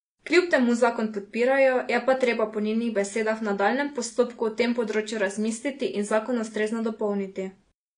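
Throughout, the speech has nothing above 10.1 kHz, and sibilants warble and fizz. The likely cause is AAC compression at a low bitrate near 32 kbps. A plain low-pass filter would dull the sound without adding that fizz.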